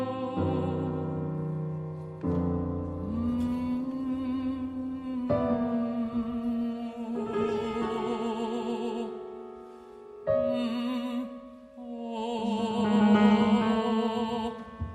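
From 2.55 s to 10.81 s, a call bitrate drop: the bandwidth estimate fell and the encoder was starved of bits, consistent with roughly 96 kbps sinking to about 24 kbps for around 5.7 s. Coarser coding turns the sound rough and muffled until recovery.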